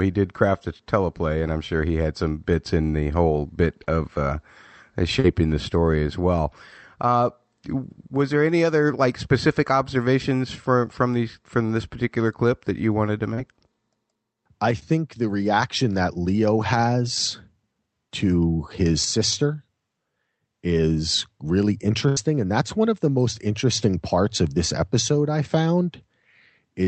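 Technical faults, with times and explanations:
3.83–3.87 s, 5.19–5.26 s, 13.34–13.39 s and 14.79–14.83 s: short concealed packet loss. Each time, between 20 and 40 ms of audio failed to arrive, after "in the whole bit", before "the story as well" and before "the reaction that". The decoder extended the preceding sound and blended back, leaving a brief smear or wobble.
22.09–22.18 s: burst of packet loss. About 80 ms in a row went missing, and the receiver stretched the last sound across the gap while fading it, heard as a short held buzz or hiss. Playback then resumes with that stretch of audio gone.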